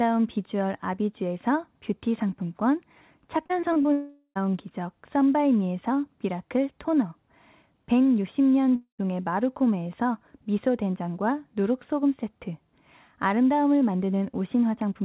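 Starting at 3.46 s and running to 3.86 s there's a burst of repeated packet loss, which gives that robotic, choppy sound. Five short gaps land in under half a second. The longest is about 34 ms, and together they take out roughly 140 ms of audio. Each hole gets patched by stretching the last bit of sound, so close to a third of that stretch is filler rather than real signal. That's what gives it the stuttering edge.

Right after that, from 3.92 s to 4.37 s, comes a long network dropout. Around 440 ms just never gets played. What you hear instead is the last sound smeared out into a fading buzz that covers most of the gap, then about 40 ms of flat silence before things pick up again with that piece missing. The likely cause is a run of packets that never arrived.

The same thing happens again from 8.75 s to 9.00 s. It's shorter this time, with roughly 240 ms lost. The smeared tail fills most of it, and then there's about 100 ms of silence before the sound comes back. 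That pattern points to a second long network dropout.

Throughout, the call path band-limits everything to nothing above 4 kHz, which fits G.711 A-law at 64 kbps.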